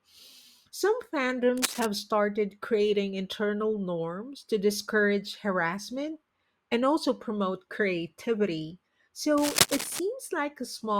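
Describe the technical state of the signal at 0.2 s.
Nothing is wrong with the signal at 0.2 s: the speech there comes through intact, with no dropout, clipping, distortion or other fault audible at that point.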